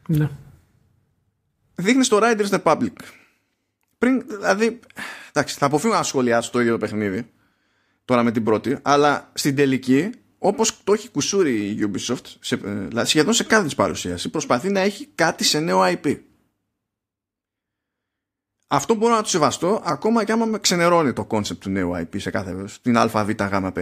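No technical faults are audible anywhere in this recording.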